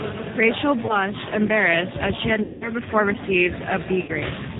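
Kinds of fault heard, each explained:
G.729 codec: The whole clip of speech carries the sound of a narrowband low-rate voice codec, consistent with G.729A at 8 kbit/s. Each 10 ms frame is rebuilt from a vocal tract filter, a pitch predictor and a handful of pulses rather than the original waveform, so the damage is plainly audible: nothing above 4 kHz survives, and the voice comes across as rough, slightly synthetic and band-limited throughout.
VoIP packet loss concealed by the speech codec: Three dropouts are filled in by the decoder extrapolating from its last pitch and filter with falling gain, giving a short buzzy or smeared stretch that fades. The first, around 0.86 to 0.97 s just before "embarrassed as she had", covers about 30 ms of missing audio. The longest follows those words, 2.43 to 2.70 s, covering about 180 ms. The last is at 4.02 to 4.11 s, about 60 ms. Recovery lags past each gap.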